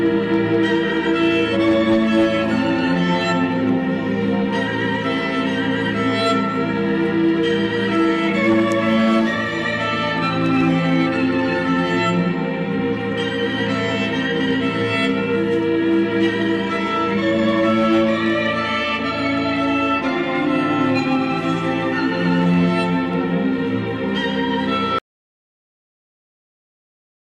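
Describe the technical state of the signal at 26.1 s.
The input was likely lost, with the recorder writing silence: an audio dropout to silence from 24.99 s to the end, leaving complete silence with no room tone.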